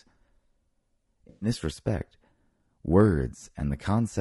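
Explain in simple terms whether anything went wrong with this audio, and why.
Low-delay AAC compression runs through the whole recording. The speech sounds rough and grainy, with a hiss between the tones of the voice and a thin, slightly artificial top end. This is likely the low-delay AAC used in video calls. It chops sound into very short slices to keep delay down, so it can't capture the fine pitch detail of a voice, and it has to cut corners that you can plainly hear.

AAC frame loss with concealment happens from 1.29 to 1.49 seconds. For that moment the speech turns smeared and noisy, as if blurred. Some chunks of audio, about 0.12 seconds' worth, never arrived. The decoder covered the gap by guessing from the last good piece it had, which fits several lost frames. It reused the general shape of the sound without the real detail, so you hear a fuzzy patch instead of silence.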